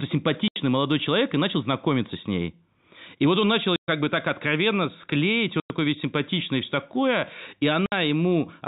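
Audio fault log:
0.48–0.56 s, 3.76–3.88 s, 5.6–5.7 s, 7.86–7.92 s: packet loss filled with silence. The speech drops out for 80, 120, 100 and 60 ms, after "вот он начал", after "бы так откровенно склеить" and after "и все такое и". All four lengths are multiples of 20 ms, which fits 20 ms packets. The receiver inserted silence instead of concealing the loss, so nothing is repeated or smeared. The gaps have hard edges and cut into the sound, unlike natural pauses. The telephone-band G.711 coding stays intact on both sides of each gap.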